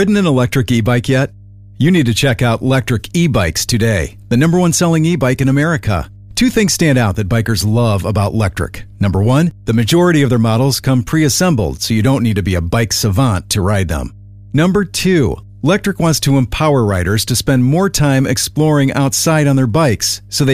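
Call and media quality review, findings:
Mains hum throughout the speech. Steady 50 Hz tone, roughly 25 dB below the signal. Ground loop or nearby transformer coupling the power line into the path.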